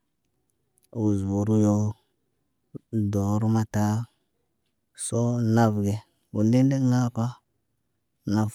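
There are no technical faults to describe at any point in this speech.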